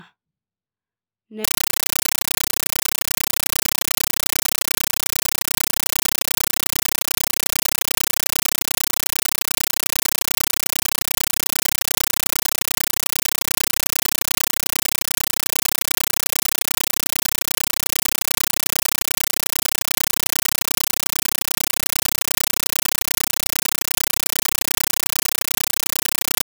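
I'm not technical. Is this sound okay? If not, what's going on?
No. From about 1.44 seconds to the end, the speech is replaced by very loud, harsh chattering static that ticks along at about 31 bursts a second, each burst lasting about 9 milliseconds with silence between. This is a compressed stream played as audio. The equipment received an encoded audio stream, which fits Dolby Digital, and played the raw data as if it were ordinary sound instead of decoding it first.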